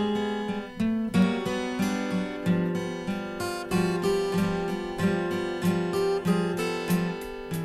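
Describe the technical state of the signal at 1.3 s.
At 1.3 s the music is within CD scratch ticks spanning 1.22 to 1.74 s: three clicks of a millisecond or two, where a blemish on each disc turn beat error correction and the player patched the samples. A spectrogram shows thin vertical broadband lines.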